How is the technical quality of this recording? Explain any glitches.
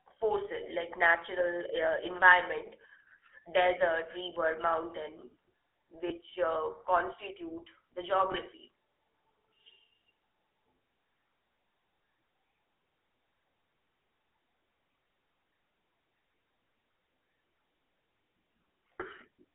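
The quality is limited: the whole recording carries the sound of a GSM phone call, and two brief dropouts break it up.

GSM full-rate codec, throughout: the speech is squeezed into a narrow 300 Hz to 3.4 kHz telephone band and rebuilt from a vocal-tract model driven by coarse, regularly spaced pulses. This gives the plainly audible buzzy, gravelly texture, which fits the 13 kbps full-rate coder.

Lost GSM frames, at 6.08 to 6.12 s, just before "uh constitute the", and at 8.32 to 8.35 s, just after "uh constitute the": a single 20 ms frame went missing each time. The decoder filled each gap by repeating the previous good frame, so the sound briefly holds with a rough, metallic ring.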